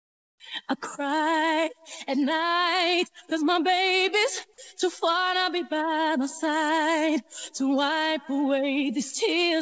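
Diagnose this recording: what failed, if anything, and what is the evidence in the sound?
The call-processing stage most likely ran discontinuous transmission: during the opening pause the sender stopped transmitting and the receiver filled the gap with synthesized comfort noise instead of the real background. From 0.0 to 0.40 s the background is a flat, featureless hiss, about 19 dB quieter than the background that follows, and it sits about 50 dB below the loudest passages. It ends when the sound begins. The band stops at 8 kHz, which fits a wideband call codec.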